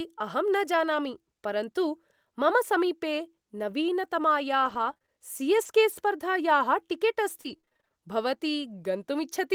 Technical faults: repeated packet loss (robotic sound); lost packet rebuilt from error correction

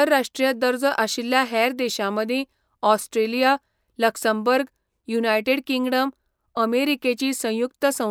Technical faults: repeated buffer

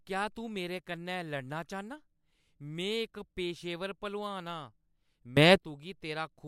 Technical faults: sudden gain jump

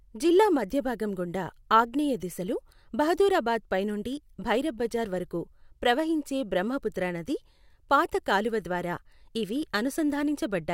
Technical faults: sample clock jitter

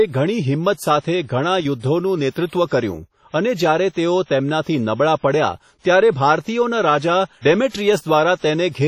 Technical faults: WMA compression; pre-echo

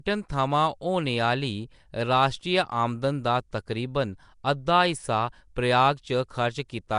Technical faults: Nellymoser compression

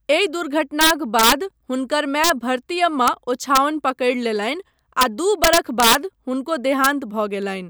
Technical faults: integer overflow

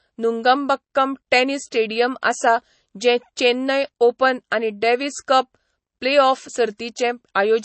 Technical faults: MP3 compression

